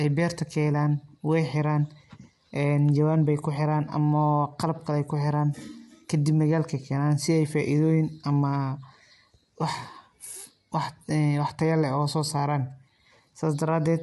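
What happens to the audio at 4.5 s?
Low-delay AAC compression is present at 4.5 s and throughout the speech. It is likely AAC-ELD at roughly 32 kbps: at this low bitrate too few bits reach each frequency line, so the voice sounds plainly rough and grainy, with noise filling between harmonics and nothing above about 11.7 kHz.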